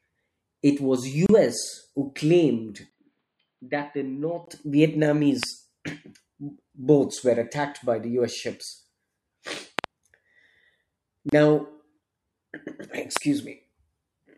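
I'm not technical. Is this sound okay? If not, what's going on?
No, it has three kinds of fault.

At 1.26 s, just after "it was", and again at 11.29 s, the speech briefly drops out for about 31 ms, a tiny hiccup where the sound stops and resumes exactly where it left off. This is a gap at a join of encoded pieces: the recording was compressed in separate chunks, about every 10 s, and stuck back together without removing the short bit of silence each chunk starts with.

From 2.90 s to 4.47 s, right after "who claimed", the voice suddenly turns duller, quieter and more muffled, with a brief 20 ms blip of silence where it changes. The crisp upper range above roughly 4.9 kHz vanishes, and a different background sound comes in. This is most likely an input switched to a poorer device: the recording jumped partway through to another microphone or a headset.

There are sharp clicks at 5.43 s, a quick double pop from 9.79 s to 9.86 s, and another at 13.17 s. 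Each one stands out clearly above the voice, and the speech carries on underneath. This is a loud pop, a sudden jolt of electricity in the signal, likely from a plug being moved, a switch, static, or a hiccup in the audio driver.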